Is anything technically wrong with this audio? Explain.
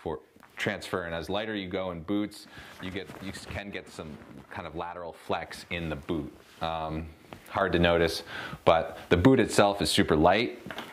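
Yes, there are two sudden gain jumps. At 2.78 s the whole level, background noise included, drops by about 6 dB in one step and stays there until 5.26 s, when it snaps back up. At 7.61 s it jumps up by about 8 dB and holds to the end. There's no fade either way. The likely cause is a gain change applied to the digital signal between one sample and the next, with no ramp.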